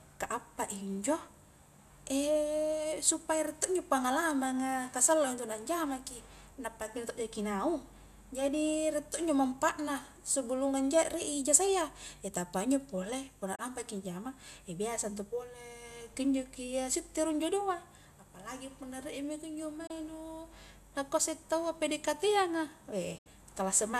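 Digital broadcast dropout hits this speech clip three times: 13.55 to 13.59 s, 19.87 to 19.91 s, and a longer gap from 23.18 to 23.27 s. Each time the receiver stopped getting usable frames and muted, fading out over about 8 ms. The first two holes fit a single lost 24 ms frame. The last fits three consecutive frames, 72 ms of sound. Whatever was broadcast during these gaps does not come back.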